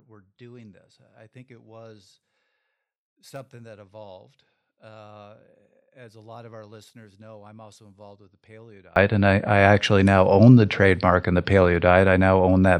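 From the start to 8.96 s the speech is nearly gone, down by about 33 dB, leaving only a faint trace of the voice. The likely cause is one channel inverted: one side of the stereo pair has reversed polarity, so when the two sides are summed to mono the centred speech, common to both, cancels. Only the small difference between the channels survives. At 8.96 s the speech comes back at full level.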